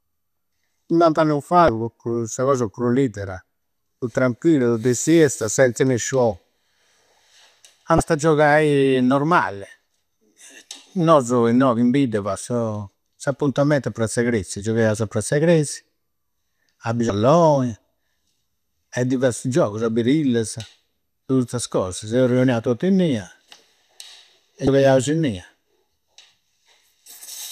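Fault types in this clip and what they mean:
Damaged data in a compressed stream: corrupted bytes make the decoder lose frame sync, giving brief 30 ms disturbances while it searches for the next frame header.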